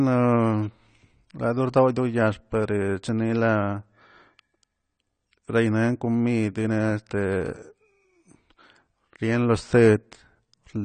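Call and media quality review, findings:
AAC compression, whole clip: speech sounds dull and smeared, with warbly, fizzy sibilants and nothing above 9 kHz. Likely a low-bitrate AAC-LC encode, which fits something around 32 kbps: the encoder drops the top band and starves the rest of bits. Damage is plainly audible.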